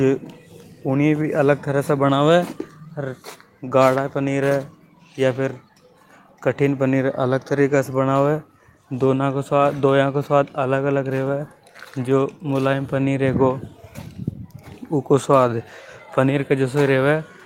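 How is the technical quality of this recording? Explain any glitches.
No technical glitches or faults can be heard anywhere.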